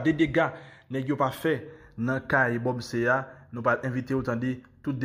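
No technical faults occur at any point in the clip, so there is nothing to describe in time order.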